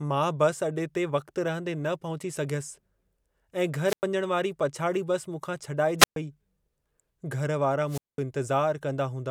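Hiss swells into near-silent holes at 3.84–4.04 s (before "वञण वारी"), 5.99–6.16 s (after "बसि मूंखां") and 7.87–8.21 s. This is wireless microphone squelch dropout: the radio signal fades and the receiver mutes for 100, 126 and 206 ms.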